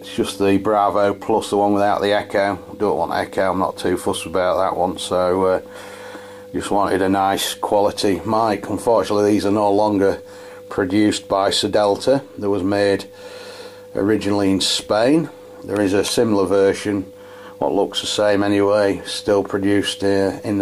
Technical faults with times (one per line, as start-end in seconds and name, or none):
none